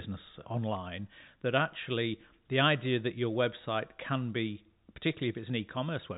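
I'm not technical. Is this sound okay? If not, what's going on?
Yes, the recording is in good technical shape: it is ordinary telephone-quality speech with the narrow, slightly muffled sound of a standard phone line, because nothing above about 3.8 kHz comes through, and nothing else is wrong with it.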